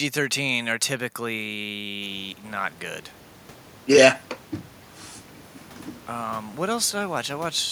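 No technical faults are audible.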